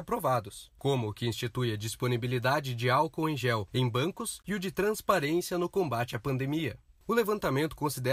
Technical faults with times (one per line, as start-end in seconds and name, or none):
none